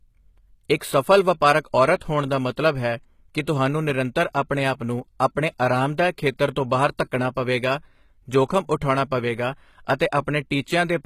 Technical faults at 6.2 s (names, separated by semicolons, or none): HE-AAC compression